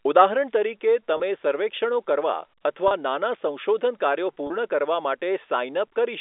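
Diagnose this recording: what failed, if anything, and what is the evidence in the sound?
Network packet loss with pitch repetition: 30 ms buzzy holds at 1.17, 2.88 and 4.47 s, where the receiver looped the last pitch cycle to fill each gap.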